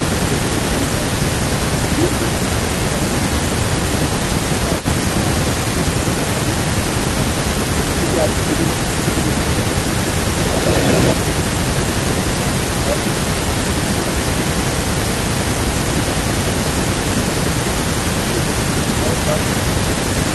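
Speech recorded over a call shows two echo-canceller faults. The likeliest cause of the first is that the canceller, unable to separate the near talker from loudspeaker echo while both sides spoke, pulled the speech down too: speech suppressed in double talk dips by about 10 dB across 0.16–6.94 s, 7.8–10.49 s, 11.15–11.91 s and 12.62–18.51 s, and by about 5 dB from 19.04 s to the end. Echo leak, likely from residual loudspeaker pickup passing the canceller, adds a delayed copy: a brief scrap at 4.77–4.87 s, 296 ms behind and about 15 dB down, then from 9.27 s to the end, 270 ms behind and about 10 dB down.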